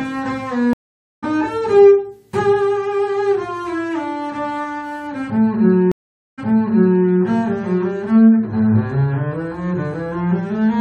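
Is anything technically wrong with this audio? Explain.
Yes. At 0.73 s the sound drops out for about 0.49 s and resumes at 1.24 s roughly 0.4 s further on, skipping material. At 5.92 s it goes silent for 0.46 s, then picks up 0.67 s earlier, repeating material until 7.05 s. Both are stream reconnects: the connection broke and the player restarted its decoder mid-stream at a different point.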